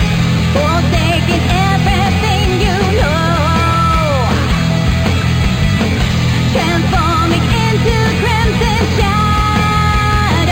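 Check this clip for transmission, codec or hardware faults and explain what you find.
There's one fault, present for the whole clip: imaging from linear upsampling. The audio was raised from 11 kHz to 44.1 kHz by joining samples with straight lines. That dulls the top of the original band and leaves a mirrored copy around 5.5 to 11 kHz, roughly 25 dB down, heard as a faint metallic shimmer on bright, hissy sounds.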